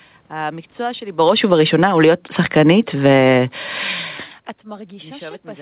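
From 1.07 s to 3.31 s the automatic gain falls. The gain control judged the input too loud, or its background noise too strong, and pulled its gain down by about 12 dB over those two and a quarter seconds. The speech starts loud and sinks, and the room noise sinks with it. That shared drop is what separates it from a talker moving away from the microphone, which would leave the background level unchanged.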